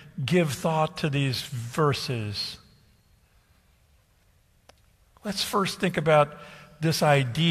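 At 0.61 s, just before "to these", and again at 2.57, 5.53 and 6.54 s, an overlap between stream segments removes 5 to 16 ms of speech at segment joins, fitting one-second segments. Unlike a dropout, no silence is inserted; the waveform jumps straight ahead in a tiny skip.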